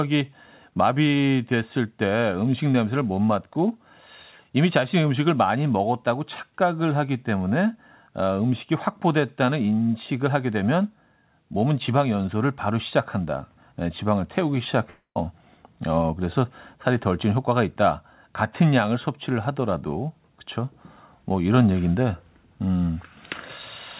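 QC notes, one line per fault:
14.90–15.18 s, long network dropout: the speech breaks off into a buzzy continuation of the last sound that fades over about 250 ms, then about 110 ms of silence. Audio resumes with roughly 260 ms lost, likely from packets that never arrived.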